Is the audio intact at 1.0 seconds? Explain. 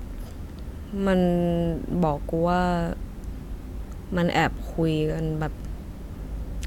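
Yes, the speech at 1.0 seconds is intact, with no dropout, click, distortion or other fault at that moment.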